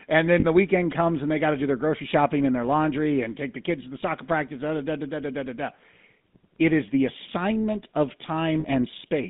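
Speech heard through the GSM full-rate codec across the whole clip: a band-limited line from about 150 Hz to 3.7 kHz with a plainly audible buzzy, gravelly texture. The pulse-excited vocal-tract model discards fine excitation detail, which fits a 13 kbps full-rate link. Lost GSM frames occur at 0.40 s, just before "the weekend comes and", and at 8.60 s, after "is the assignment of". Each dropout lasts about 40 ms, consistent with two 20 ms frames, and the decoder bridges it by repeating the last good frame, producing a brief rough, metallic ring.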